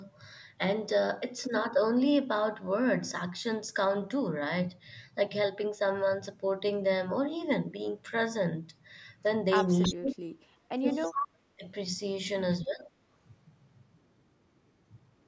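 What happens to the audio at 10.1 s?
From 9.93 to 10.24 s the speech is pushed down by about 35 dB at its deepest: speech suppressed in double talk, likely an echo canceller treating the talker as far-end echo. The waveform collapses to a thin strip, and the spectrogram darkens top to bottom.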